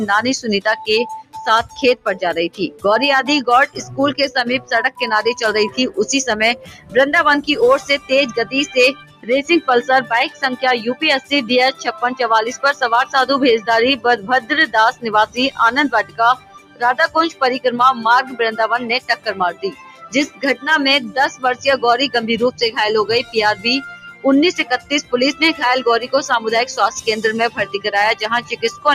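Noise suppressor applied to music or sounds, throughout: a speech-tuned suppressor treats steady tones and tails as noise, so the level swings by around 15 dB and the sound pumps and thins.

Sound cut by the noise suppressor, from 1.22 to 26.08 s and from 27.49 to 28.85 s: held and fading sounds are pulled down by as much as about 18 dB in the first stretch, affecting roughly seven seconds in all. In the second stretch they drop by up to about 13 dB, affecting well under a second. Their decays are clipped short while sudden attacks come through.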